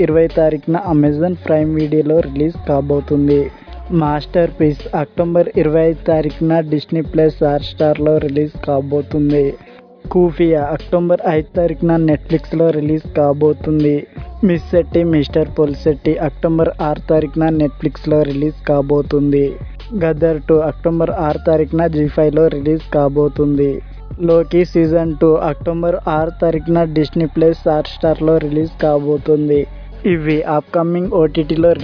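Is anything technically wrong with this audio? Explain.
No, nothing stood out as technically wrong on listening.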